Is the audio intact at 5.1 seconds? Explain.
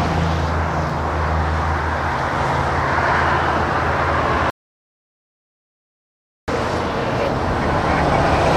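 No, 5.1 s falls inside an audio dropout to silence from 4.50 to 6.48 s: dead silence, no room tone, likely a lost input while recording continued.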